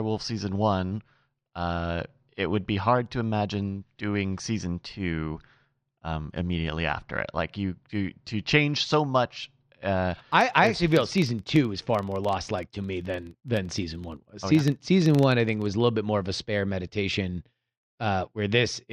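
A speech clip in which, from 9.98 s to 15.70 s, after "to change so much" and ending before "a little bit more", a low 23.4 Hz buzz of ticks rides on the speech, louder where it is louder. A filter restarted on every block loses its state, which fits 2048-sample blocks.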